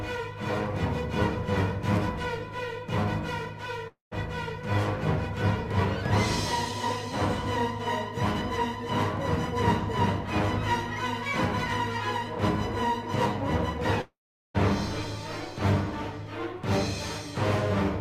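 A long network dropout, likely from incoming audio ceasing to arrive, cuts in at 3.87 to 4.13 s and 14.01 to 14.56 s. Each time the last sound trails off as a fading buzz, then about 0.14 s and 0.42 s of silence follow before the sound resumes with that stretch missing.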